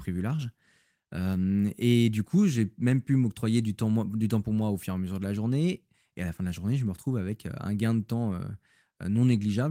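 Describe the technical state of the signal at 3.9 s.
At 3.9 s the speech signal is intact, with no fault present at that moment.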